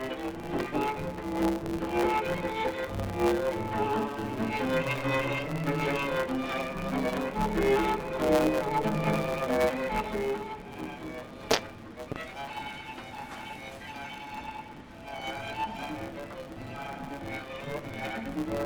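From start to finish the audio carries a steady buzz at 138 Hz and runs about 1.6 times too fast while keeping roughly its normal pitch. That is a block size mismatch (truncated): one stage hands over blocks longer than the next stage takes in, and the tail of each block is discarded. The figures fit 512-sample blocks being cut down to about 320. A resampling or tape-speed fault would raise the pitch along with the tempo, and a dropout would leave gaps. Here the pitch holds, nothing goes silent, and the buzz stays fixed at the block rate.

At 0.60 s a single loud pop lands on top of the sound, peaking about 15 dB above it. At 12.12 to 12.18 s there are two pops in quick succession, about 10 dB above the sound. The likely cause is an electrical pulse from a plug, a switch, static or a driver glitch being added to the signal. The sound keeps running underneath each pop without a break, which is what separates a loud pop from a dropout or a cut. 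Its size also sets it apart from the steady buzz of the truncation.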